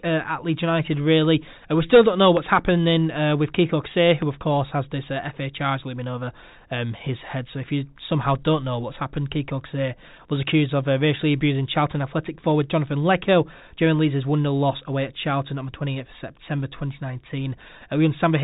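Speech carried over G.711 telephone coding, which fits a 64 kbps mu-law line and limits the band to below 4 kHz, with no technical fault to be heard anywhere in the recording.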